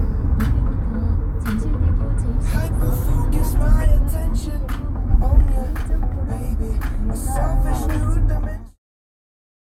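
Sounds, with no audible technical faults.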